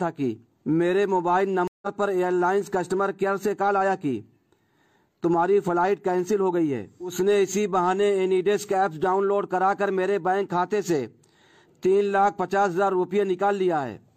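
At about 1.68 s there's a stream reconnect: the connection dropped, the player went quiet for roughly 146 ms, then restarted decoding mid-stream. When sound returns near 1.87 s it has jumped ahead about a tenth of a second, so a small chunk is simply missing.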